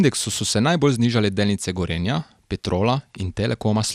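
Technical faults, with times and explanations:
Throughout, MP2 compression: dull, gurgling speech with nothing above 15.2 kHz, likely Layer II coding near 80 kbps switching off starved upper sub-bands.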